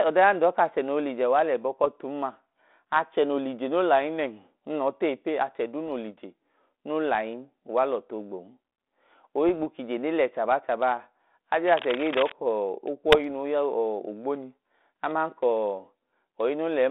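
Brief pops and rough, gritty bursts with momentary level jumps break through the speech at 1.84 to 1.88 s, 5.87 to 5.89 s, 9.47 to 9.57 s just before "kije ne le chaba", and 13.12 to 13.20 s just before "nuu ya". These are bit errors on an ADPCM link. Flipped bits knock the decoder's step size and prediction off track, so each hit rings on briefly. The error rate is very low, and the speech comes through 32 kbit/s G.726 with its band-limited telephone sound, roughly 250 Hz to 3.6 kHz. From 11.67 to 12.33 s, a dense, uneven scratching and rustling sits about 10 dB below the speech. This is cable scratch noise, likely from a worn cable or connector being moved so that its contact resistance fluctuates rapidly.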